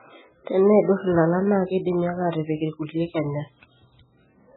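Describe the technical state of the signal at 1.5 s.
At 1.5 s the speech carries the same heavy MP3 compression damage heard through the whole clip: everything above 4 kHz is gone, and weak detail flickers in and out, giving a watery, swirly sound. That's likely an encoder starved of bits, consistent with roughly 8 kbps.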